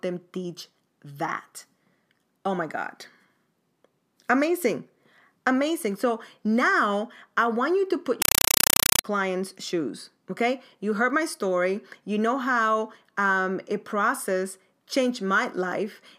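From 8.22 to 9.04 s the speech is swamped by very loud, chattering static: a compressed stream played as audio. You can hear 5.33 ms noise bursts, each followed by silent padding, repeating 31.25 times a second, which points to undecoded AC-3 data sent out as ordinary samples.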